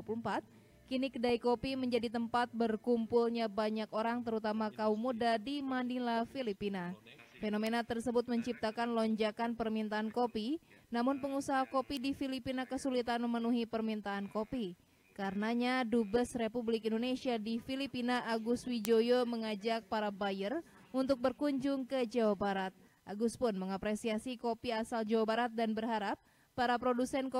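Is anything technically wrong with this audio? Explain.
Yes. There are bit error spikes at 7.67 s, 11.97 s and 18.85 s. At each one, a single flipped bit makes one or two samples jump by a power of two and snap straight back, reaching about -21 dBFS at the first two and about -9 dBFS at the last. Each is heard as a sharp, isolated tick unrelated to the surrounding sound. On the waveform it is a lone vertical needle, and on a spectrogram a thin full-band vertical line.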